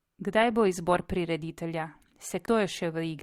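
Right after "bo izbor prireditelja", from 2.42 to 2.48 s, damaged data in the compressed stream produces a brief glitch: the decoder misreads corrupted frames, loses sync and hunts for the next frame header. A spectrogram shows a short broadband smear, and the waveform shows an abrupt discontinuity.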